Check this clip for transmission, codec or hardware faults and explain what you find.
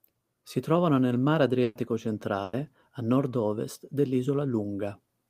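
Two bursts of packet loss interrupt this speech. The first runs from 1.63 to 1.77 s, right after "trovano nel mar", and the second from 2.43 to 2.55 s. Each time, packets failed to arrive in time, so the receiver extended the last sound and faded it. That fill lasts about 120 ms with a brief 10 ms silence in the first burst and about 100 ms in the second. The speech then resumes with that stretch missing.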